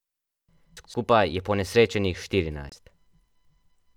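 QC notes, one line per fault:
0.77–0.94 s, chunks out of order: two adjacent 85 ms blocks play swapped, one block arriving a chunk late. The sound jumbles briefly, seen as abrupt waveform steps at the three joins.
2.69–2.72 s, Bluetooth stall: the sound drops to 25 ms of silence, then resumes. A likely cause is a wireless stall that emptied the headphone buffer before resent packets arrived. It shows as a flat gap in the waveform and a narrow blank column on the spectrogram.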